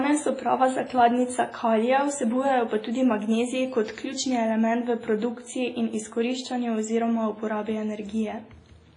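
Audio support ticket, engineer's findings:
Heavy smearing and washy ringing on the speech across the whole clip, hiss pumping with the signal, nothing above 10.1 kHz. Likely WMA compression, block-transform quantisation noise spreading over tens of ms, weak lines dropped, which fits a low bitrate around 24 kbps.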